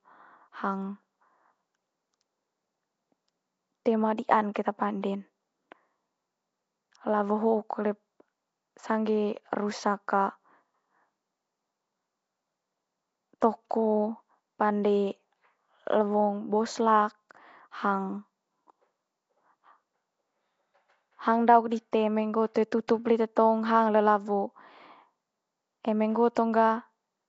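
From the start there's a rough, hissy halo and an underwater smear on the speech, with nothing above 7.7 kHz. That's likely Nellymoser compression at a low rate, something like 32 kbps. Pre-echo hits at 4.54, 22.54 and 22.88 s: about 15 ms of hiss leaks just ahead of sharp attacks, softening them, because the block's quantisation noise spreads backwards.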